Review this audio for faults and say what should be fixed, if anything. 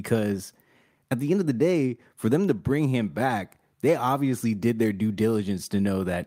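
Nothing stood out on listening to this speech, so there is nothing here that needs fixing.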